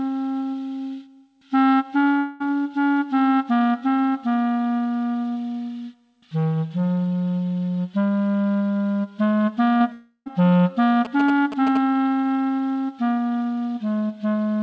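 From 2.18 to 2.42 s the sound carries on as a smeared, fading buzz for about 220 ms, then rejoins further along. This is likely a long network dropout: nothing arrived, the receiver stretched the last sound over the gap, and that stretch of audio was lost.

At 9.78 to 9.82 s a brief wobble of about 20 ms is heard. This is short concealed packet loss: a few hundredths of a second of audio missed the decoder, which extrapolated the preceding sound and blended back in.

Just after, from 9.92 to 10.28 s, comes a longer fading continuation that ends in roughly 70 ms of silence before the audio returns. This is likely another long network dropout, with about 340 ms missing and mostly covered by concealment.

From 11.05 to 11.77 s a galloping dit-dit-dit of short 217 Hz buzzes sits about 10 dB below the audio. These are GSM signalling bursts: a nearby 2G phone's intermittent transmissions were rectified by the audio circuitry. 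Across the clip, nothing is heard above 8 kHz, consistent with the G.722 call path.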